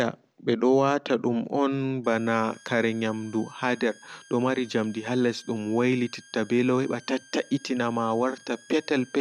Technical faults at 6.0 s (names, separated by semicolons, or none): switching supply whistle